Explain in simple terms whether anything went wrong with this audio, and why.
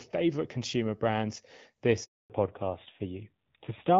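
Two things go wrong, and they happen back to back. First there's a handover gap from 2.04 to 2.30 s. The call gets passed from one network to another, and for about a quarter of a second, 260 ms, nothing comes through. The voice fades out almost instantly and you get dead silence until the new connection picks up. Whatever was said in that stretch is simply gone.

Right after that, from 2.30 s to the end, you get a fallback to narrowband. Before the switch the call was running on HD Voice, the wideband codec, and it sounds clear. After the handover the phone drops to the older narrowband codec, so everything above 4 kHz is cut off. That's why the voice suddenly sounds duller and flatter, and a bit rougher, for the rest of the clip.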